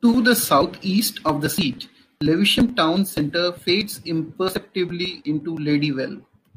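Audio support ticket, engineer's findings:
No faults found in this speech recording; nothing to attribute to any component.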